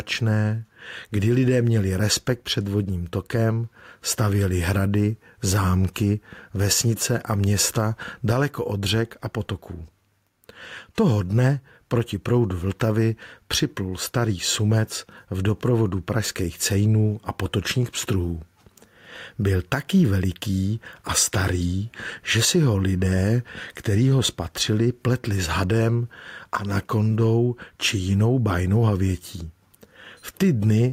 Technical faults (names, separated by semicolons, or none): gain pumping